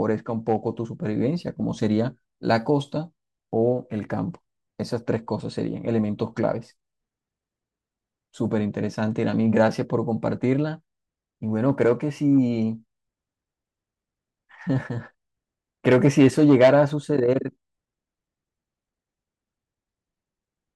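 Nothing technical stands out in this speech recording; it's a straightforward listen with no faults to point to anywhere along the way.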